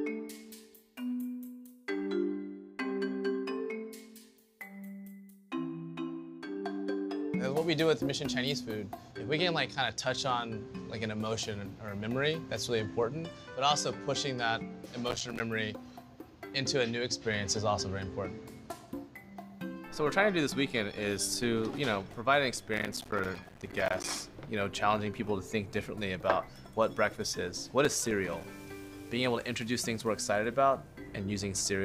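Processor overload crackle hits at 15.09–15.40 s, again longer at 22.74–24.09 s, and at 27.85–28.44 s. The processor keeps missing buffer deadlines, which fits buffers of around 5 ms, and each miss drops a hard-edged bit of silence, so you get gritty tearing.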